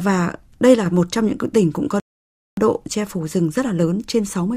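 At about 0.76 s the level suddenly drops by about 4 dB and stays there until about 0.86 s, when it snaps back. That's a sudden gain jump. The speech and the background noise fall together in a single step with no fade, so you hear a hard edge at each end of that short stretch. It's likely a gain setting being applied straight away instead of being ramped in over a few milliseconds.

Then at 2.00 s the audio cuts out completely. There's silence until 2.57 s, and the speech picks up exactly where it left off. That's a rebuffering stall. The player ran dry of downloaded data and simply waited for more to arrive. None of the speech goes missing, but the pause adds about 0.57 s to the playback. It's heard as an unnatural gap in mid-flow rather than a skip.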